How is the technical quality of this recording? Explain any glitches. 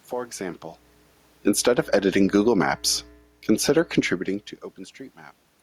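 The recording has audible level problems from automatic gain control, which pumps the level down and up within a few seconds.

Automatic gain falling occurs first from 1.32 to 2.52 s, then again from 3.42 to 3.88 s. The gain control judged the input too loud and pulled its gain back gradually. The first drop is about 11 dB, the second about 4 dB. The speech sinks, and the room noise sinks with it. That shared drop is the giveaway.

Automatic gain rising overlaps the first drop, running from 1.8 to 3.06 s. Here the control judged the input too quiet and raised its gain by about 5 dB. Speech and background swell together over roughly a second. The near-simultaneous fall and rise sound like the level hunting. The changes around 0.5 s and 4 s are different: the talker shifts position, and the room noise stays level.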